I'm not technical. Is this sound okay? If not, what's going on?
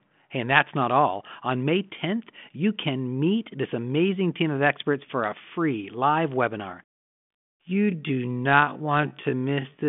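No. From 6.89 s, right after "a free live webinar," to the end of the clip, the speech runs at roughly half its normal pace while the pitch stays where it was. This is a time-stretched section. The likely cause is software that lengthened the audio to fill a set duration by repeating short slices of sound instead of playing it slower. The narrow, phone-line quality of the whole clip comes from the G.726 ADPCM telephone coding it passed through.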